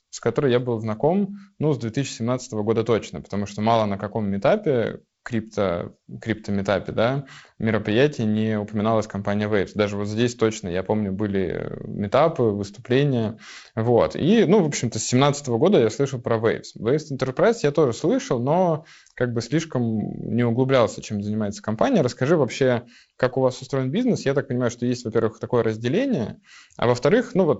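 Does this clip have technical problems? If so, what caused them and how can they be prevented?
No, nothing here needs tracing or preventing: the speech runs through G.722 wideband telephone coding at 48 kbit/s, with content stopping near 7.7 kHz as that codec's bandwidth dictates.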